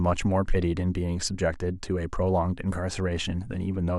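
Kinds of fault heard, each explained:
No kinds of fault are heard in this speech, so there are none to explain.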